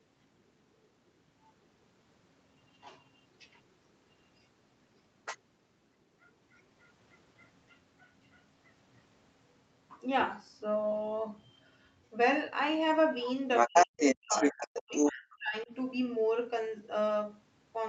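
Other side's voice leaking through, at 13.21–13.26 s and again from 13.56 to 15.11 s: a brief faint scrap, then a longer stretch slightly louder than the talker, likely loudspeaker echo the canceller failed to remove. Speech suppressed in double talk, from 13.67 to 14.35 s and 14.52 to 15.72 s: the talker's speech drops nearly to silence during the overlap, likely because the canceller turned everything down.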